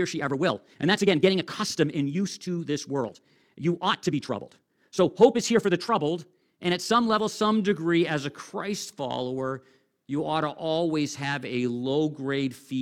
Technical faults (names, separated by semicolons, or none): time-stretched section